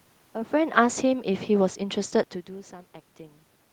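From about 0.55 s to 1.89 s you can hear automatic gain falling. The gain control decided the input was too loud or too noisy and eased its gain down by about 3 dB over that stretch, so the level sinks gradually and the room noise drops right along with it, a giveaway that it's the gain moving and not the talker. That talker does shift position around half a second in and again near 2 seconds, though.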